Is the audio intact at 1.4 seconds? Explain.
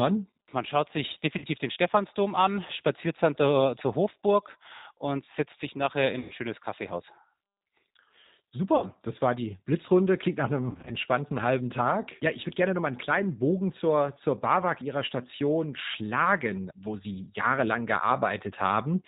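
No. Right after "schaut sich", from 1.38 to 1.44 s, there is VoIP packet loss concealed by the speech codec. About 40 ms of audio went missing, which fits two lost packets. The decoder filled the gap by extending its last pitch and filter settings while lowering the gain. The result is a stretched, buzzy or noise-like fill that fades. Because each frame builds on the one before, the sound stays weak or distorted for a short time after the gap.

The whole clip also carries the G.729 codec. This is G.729A at 8 kbit/s, and its damage is plainly audible. The codec rebuilds speech from a vocal tract filter, a pitch predictor and a few pulses in each frame. Nothing above 4 kHz passes. The result sounds rough and synthetic, and that includes the moment at 1.4 s.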